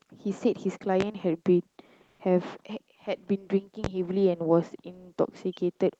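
A sharp loud pop cuts through the speech from 1.01 to 1.04 s, and a second one follows from 3.84 to 3.88 s. Each is a single hard click, roughly 15 dB above the surrounding signal, and the speech carries on underneath without a break. The likely cause is a sudden voltage pulse, such as a switch transient, static discharge or a driver glitch, added to the signal and briefly shaped by the circuits downstream.

Between 2.07 and 2.19 s, about 120 ms of the quiet background turns into a smooth, featureless hiss whose level shifts by about 4 dB. The real room sound, already sitting about 48 dB below the loudest speech, loses its texture for that stretch. This is comfort noise in place of the background, likely from Opus discontinuous transmission. When the sender detected no speech, it stopped sending audio, and the receiver filled the gap with synthetic noise shaped only roughly like the original. 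The call codec limits the bandwidth to 8 kHz throughout.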